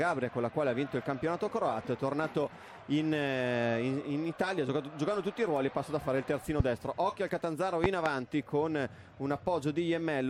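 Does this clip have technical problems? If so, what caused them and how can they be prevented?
Yes, there are loud pops at 6.60–6.63 s and a double one at 7.84–8.09 s, roughly 20 dB above the sound, likely voltage spikes from a plug, switch or static. Seat connectors firmly and avoid switching gear mid-recording.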